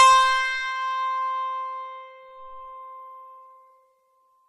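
A music clip with plainly audible MP3 compression throughout: nothing above 15 kHz, plus watery, swirling artefacts, likely from a low bitrate around 40 kbps.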